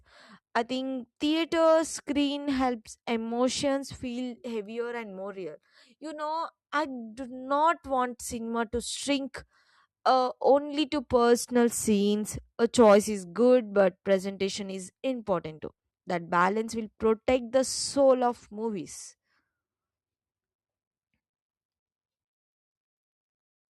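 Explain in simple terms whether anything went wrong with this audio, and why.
Nothing went wrong with this audio, because no fault can be heard anywhere in the speech.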